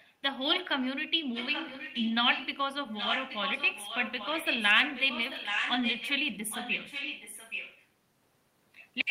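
Echo leak at 0.53–0.68, 1.34–2.15, 2.33–2.47, 2.93–6.12 and 6.31–7.87 s: a delayed copy of the speech returns about 0.82 s late, faint to fairly strong, likely from a speakerphone whose echo canceller let it through.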